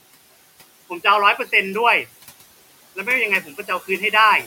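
A speech recording with noise suppressor artifacts from start to finish. A suppressor is working on it frame by frame. It cuts each frequency band it judges to be steady noise, here by about 17 dB. So the background drops away in the pauses between words. It comes back up underneath the speech, where the bands are let through. That pumping runs throughout. The room noise it acts on sits about 20 dB below the speech.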